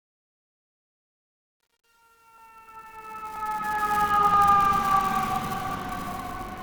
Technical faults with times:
0.00-3.98 truncation distortion on a fade
2.38 audio missing between chunks
3.36 audio missing between chunks
4.34 audio missing between chunks
6.29 audio missing between chunks

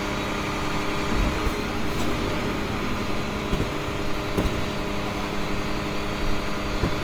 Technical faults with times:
0.00-7.04 Opus compression

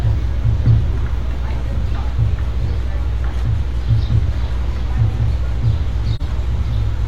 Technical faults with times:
6.15-6.21 AAC frame loss with muting

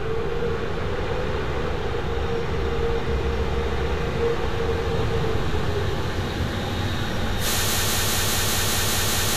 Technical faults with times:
7.68-9.36 broken-record loop

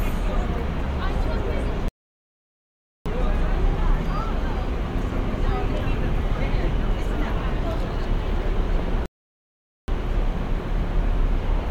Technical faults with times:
1.88-3.06 rebuffering stall
9.06-9.88 rebuffering stall

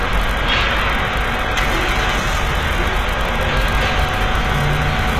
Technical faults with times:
0.00-5.19 HE-AAC compression

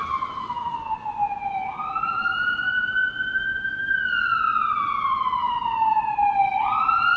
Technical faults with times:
0.81-1.12 sound cut by the noise suppressor

